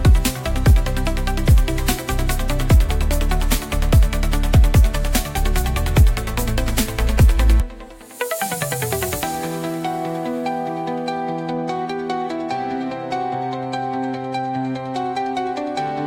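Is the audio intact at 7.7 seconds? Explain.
Yes, at 7.7 seconds the audio is intact, with no dropout, click, distortion or other fault at that moment.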